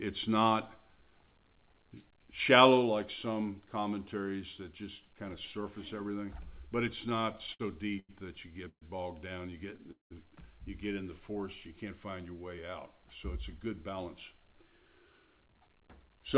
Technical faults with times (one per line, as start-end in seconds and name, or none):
6.96-7.61 repeated stalls (stutter)
7.99-8.11 short stall from a late packet
8.69-8.83 call audio freeze
9.70-10.12 repeated stalls (stutter)
13.02-16.37 jitter buffer speed-up